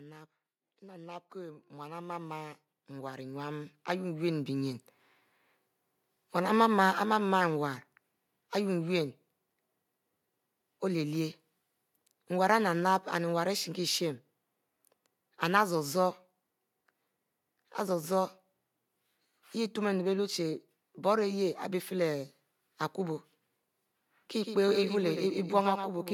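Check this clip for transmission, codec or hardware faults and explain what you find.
Three gain and timing faults appear in this speech clip.

Automatic gain rising, 0.62 to 4.89 s: the gain control judged the input too quiet and lifted it by 19 dB, so speech and background swell up together.

Automatic gain falling, 6.42 to 18.46 s: the gain control judged the level too high and eased it down by about 3 dB, a slow, gentle sinking of voice and background.

Doubled audio track, from 24.42 s to the end: a second full-band copy, roughly 100 ms behind and about 10 dB quieter, enters abruptly without any room decay, likely a slower capture path mixed in.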